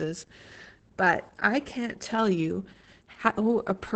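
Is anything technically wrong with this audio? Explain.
Yes. Opus voice compression affects the whole speech clip. Its SILK coder models speech by linear prediction, and at this heavy damage level, which fits roughly 10 kbps, the excitation is coarse. Speech sounds muffled, hoarse and slightly robotic.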